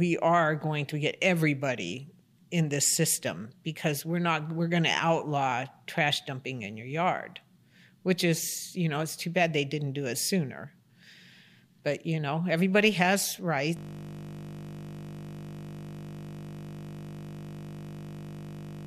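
At 13.77 s the speech gives way to a steady, harsh buzz that holds until the clip ends at about 19 s. This is a system hang loop. The computer or its audio driver stopped supplying new samples, but the sound hardware kept replaying the same 20 ms slice of its ring buffer, some 255 times over. Repeating so short a fragment at 50 times per second fuses into a continuous 50 Hz drone rather than an audible stutter.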